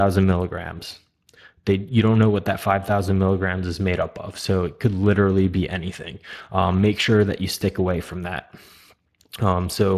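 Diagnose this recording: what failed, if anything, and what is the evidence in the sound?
Codec stage: Speex damage is plainly audible throughout, a grainy CELP excitation roughness rather than transform-codec swirl, with nothing above 15.3 kHz, fitting roughly 22 kbps.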